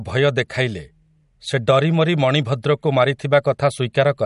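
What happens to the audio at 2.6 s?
At 2.6 s the speech sounds watery and swirly, with metallic chirping on s sounds and nothing above about 11.1 kHz. This runs through the whole clip and is likely MP3 compression at a low bitrate near 48 kbps, cutting treble and zeroing weak frequency lines.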